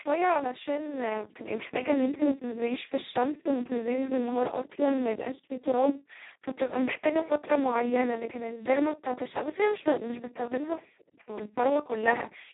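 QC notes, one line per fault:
Throughout: Speex codec, heavy damage. Speech is hoarse, noisy and robotic because the CELP coder has almost no bits to describe the excitation, which fits a bitrate near 2 kbps at its lowest, vocoder-like setting. Nothing remains above 3.9 kHz.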